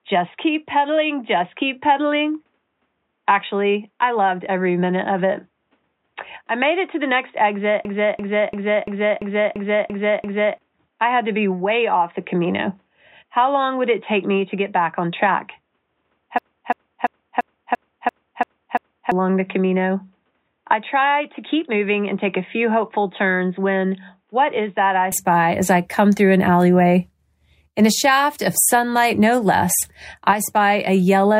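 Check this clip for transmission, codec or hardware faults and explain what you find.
Two kinds of fault are present: an input-device change and two system hang loops.

Input switched to a poorer device, 0.0 to 25.12 s: the recording likely ran on a narrower-band input until 25.12 s. Nothing above 3.8 kHz survives, the level sits about 5 dB lower, and its own noise floor lies roughly 50 dB down. The sound then opens up with no gap at the switch.

System hang loop, 7.85 to 10.58 s and 16.38 to 19.12 s: each time the machine stalled while the audio hardware kept replaying its ring buffer, which fits a 16384-sample buffer. A 341 ms piece repeats eight times at 2.93 Hz, a rhythmic stutter replacing roughly 3 s of speech.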